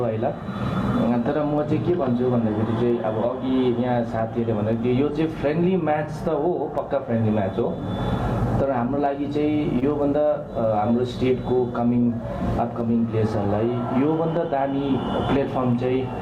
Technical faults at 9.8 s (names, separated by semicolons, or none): gain pumping; short stall from a late packet